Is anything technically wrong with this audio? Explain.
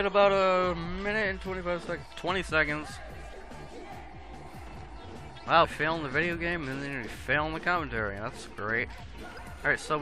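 Yes. Two brief bursts of damaged data in a compressed stream occur, at 5.63 to 5.65 s and at 9.37 s. Corrupted bytes make the decoder misread those frames and lose sync until it finds a valid header, producing short glitches.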